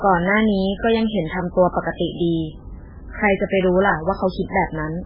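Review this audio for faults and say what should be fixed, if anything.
Across the whole clip the speech sounds heavily watery and swirly, with nothing above 5.3 kHz and smeared consonant attacks, likely MP3 compression at a very low bitrate near 8 kbps. A plain low-pass filter would dull the treble without this frame-to-frame warbling. Encode at a much higher bitrate, or keep a lossless master.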